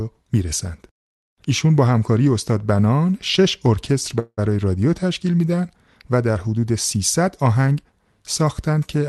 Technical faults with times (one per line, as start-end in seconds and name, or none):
4.19-4.39 call audio freeze